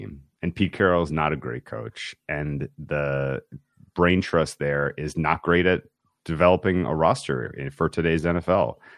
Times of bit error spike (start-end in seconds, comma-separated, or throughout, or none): none